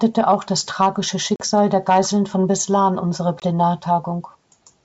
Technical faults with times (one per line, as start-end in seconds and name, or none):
1.36-1.44 packet loss on an ADPCM call
3.40-3.43 packet loss on an ADPCM call